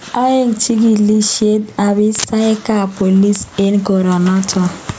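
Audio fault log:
throughout: gain pumping. The room background swells in every pause, then ducks under each loud syllable, a level swing of around 10 dB, likely from gain set far too high and a fast limiter clamping it. On the waveform the envelope looks flattened; on a spectrogram the noise floor brightens between phrases.
2.15–2.24 s and 3.36 s: integer overflow. Peaks exceeding the integer range wrap to the opposite sign instead of limiting, giving violent cracks far harsher than clipping. The first overshoots by about 4 dB; the second barely touches the limit. The waveform jumps rail to rail; the spectrogram shows vertical broadband streaks.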